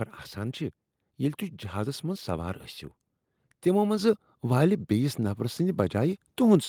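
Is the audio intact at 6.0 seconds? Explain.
Yes, the audio is intact at 6.0 seconds, with no dropout, click, distortion or other fault audible at that moment.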